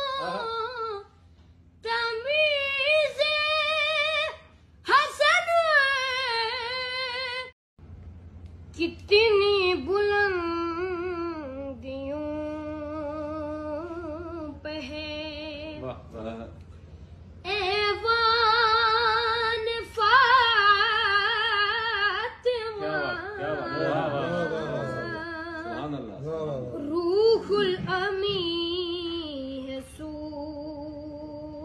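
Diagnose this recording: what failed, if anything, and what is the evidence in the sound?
Nothing in the chain seems to have failed here; listening closely, there's no sign of trouble at any stage from the wiring through to playback.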